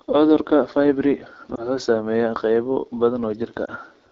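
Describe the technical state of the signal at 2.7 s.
At 2.7 s the speech carries AMR wideband (HD Voice) codec damage, present across the whole clip. The pulse-excited vocal tract model leaves voicing rough and raspy, with synthetic noise above 6.4 kHz, a plainly audible degradation that fits a low rate such as 8.85 kbit/s.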